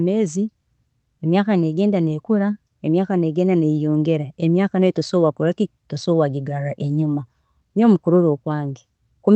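No technical faults are audible.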